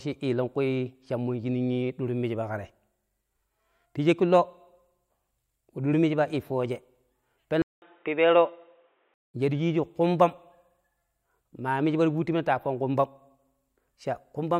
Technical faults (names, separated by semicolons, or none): input switched to a poorer device